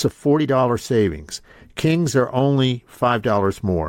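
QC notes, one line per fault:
No faults found in this speech clip. Nothing here calls for a timed note.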